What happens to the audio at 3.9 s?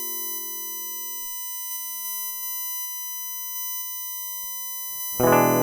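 At 3.9 s the music carries USB whine, present across the whole clip rather than starting there. Current drawn by the USB bus in 1 ms frames leaks in through the power or ground, producing a fixed-pitch whine at 1 kHz and its multiples, loudest at 14 kHz and roughly 10 dB below the music. On a spectrogram it shows as steady horizontal lines spaced 1 kHz apart, brightest at 14 kHz. On the waveform it adds a fine, constant fuzz.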